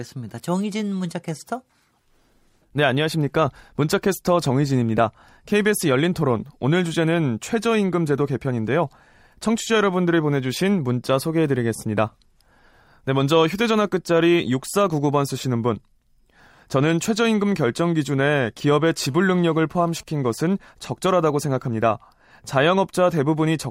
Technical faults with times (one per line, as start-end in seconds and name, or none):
19.07-20.35 GSM phone buzz